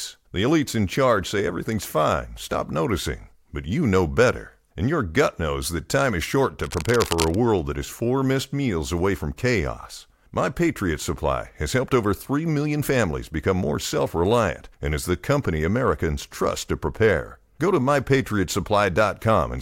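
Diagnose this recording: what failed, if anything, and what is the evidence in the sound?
The fault sits in the analogue wiring. From 6.64 to 7.37 s, dense, uneven bursts of scratching noise ride over the speech at about 10 dB below it. The likely cause is cable scratch noise, where a worn cable or connector moves and its contact resistance jumps rapidly.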